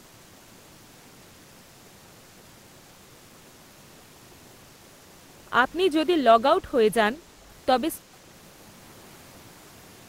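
At 6.53 s the speech level dips briefly, falling by a few decibels before recovering at 6.72 s, with roughly 150 ms of the span audibly affected. The pattern points to speech suppressed in double talk. The likely cause is an echo canceller that heard both ends active at once, could not tell the near talker from loudspeaker echo, and pulled down its output gain. It sounds like a short, shallow duck in loudness.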